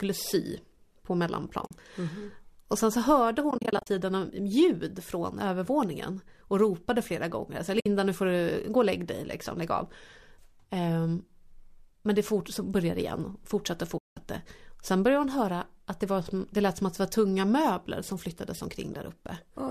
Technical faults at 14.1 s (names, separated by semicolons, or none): AAC frame loss with muting